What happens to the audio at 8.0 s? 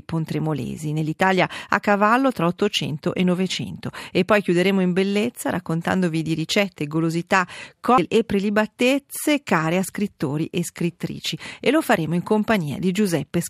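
A CD skip occurs at 7.98 s. A knock or a disc flaw throws the laser onto another turn of the spiral, so playback mutes for a couple of milliseconds, giving a short tick, then resumes abruptly from a different point in the audio.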